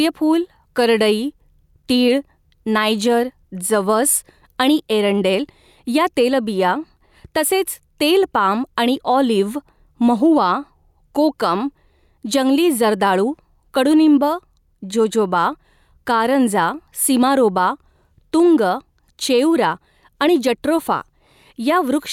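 Speech clip with gain pumping throughout: the level swings by about 5 dB, pulling loud and soft parts closer together, likely from excessive input gain driving a fast limiter.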